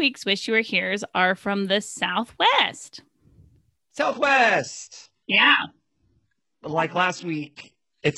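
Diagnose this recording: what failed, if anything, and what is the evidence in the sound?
From 4.03 s to the end, the speech abruptly loses everything above 8 kHz and turns thin, with no gap: an adaptive stream at a lower bitrate, consistent with a network slowdown forcing a very low-bitrate HE-AAC rendition.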